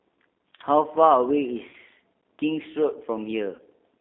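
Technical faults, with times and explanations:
Throughout, G.729 codec: The speech has the rough, slightly synthetic grain of a low-rate coder that rebuilds each 10 ms frame from a vocal tract filter, a pitch predictor and a few pulses. This is plainly audible, and the quality points to G.729A at 8 kbit/s. Nothing below 250 Hz or above 3.6 kHz survives. A spectrogram shows hard edges at both limits with empty space above 3.6 kHz, and the harmonics look smeared rather than crisp.
1.69 to 1.75 s and 3.55 to 3.61 s, VoIP packet loss concealed by the speech codec: At each of these points about 40 ms of audio, likely two packets, went missing. The decoder filled the gap by repeating its last pitch and filter with falling gain, so the speech turns into a short buzzy tone or coloured noise that fades. Because every frame builds on the one before, the speech stays weak or distorted for a moment after real audio resumes. 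The waveform shows a stretch that tapers in level and then recovers slowly.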